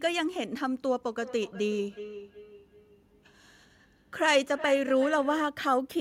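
From 1.19 s to 5.5 s the speech carries a feedback echo between two devices. A second device in the same room replays this microphone's signal, and the microphone picks it up again. The local echo canceller only removes its own playback, so this copy gets through. Each phrase returns roughly every 0.4 s, thinner and more ringing, peaking at about 15 dB below the speech. On a spectrogram, faded copies of each syllable repeat at that spacing. The waveform shows smaller repeated bursts trailing each word.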